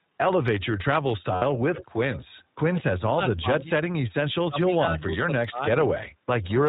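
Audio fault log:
throughout: iLBC codec. The speech sounds slightly rough and synthetic at 15.2 kbps in 20 ms frames; the spectrogram shows nothing above 4 kHz.
1.36–1.44 s: lost iLBC frames. A 60 ms buzzy held vowel, fitting three lost frames, appears as a flat repeated pitch pattern; the speech recovers almost at once.
1.75–2.25 s and 2.74–2.82 s: echo leak. A faint copy trails the speech by 81 ms at about 15 dB below it, which the waveform shows as doubled onsets. Its likely cause is a loudspeaker echo escaping cancellation.
2.82–3.90 s and 4.48–5.91 s: speech suppressed in double talk. The speech dips and cuts out in pieces, about 0.7 s and 0.4 s in total, by up to roughly 40 dB and 25 dB. The waveform shows gouged gaps. This is likely an echo canceller ducking both talkers.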